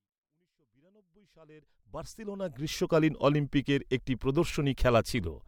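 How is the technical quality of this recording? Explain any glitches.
No glitches, no faults present.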